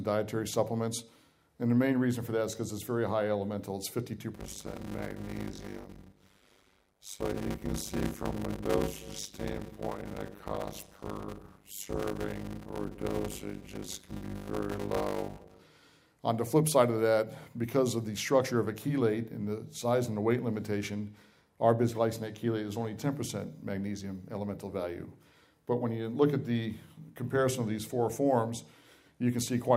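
From 4.34 s to 15.60 s there is a block size mismatch (padded). One stage hands over shorter blocks than the next stage expects, and the shortfall in each block is filled with silence. A tiny gap lands in every block. This produces a steady buzz at 100 Hz, the block rate. The sound also drags, running at about 0.53 times normal speed while keeping roughly its usual pitch. This fits 256-sample blocks being read as 480-sample blocks at 48 kHz.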